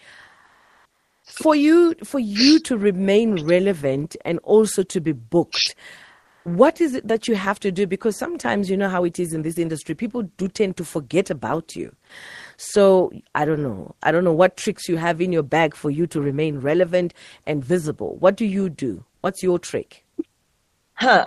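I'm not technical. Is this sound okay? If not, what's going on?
No. Comfort noise in place of the background appears at 0.45–1.23 s before "for you for you", 6.23–6.45 s after "also to be booked", and 19.15–19.23 s after "do you do". In those gaps the real room sound is swapped for a flat, featureless hiss, likely because the call stops sending audio during pauses and the receiving end fills them with made-up noise.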